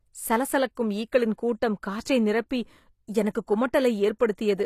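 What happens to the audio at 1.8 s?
At 1.8 s, as throughout, the treble sounds gritty and lispy and stops near 14.9 kHz, likely HE-AAC compression rebuilding the top band at a bitrate around 24 kbps.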